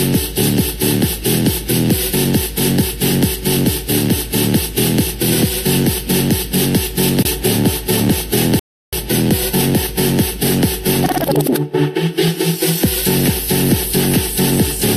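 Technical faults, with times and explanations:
8.59 to 8.93 s, rebuffering stall: playback ran dry of downloaded audio, so the sound drops to silence for about a third of a second (334 ms) and then picks up exactly where it halted. Nothing is skipped; the gap simply adds time.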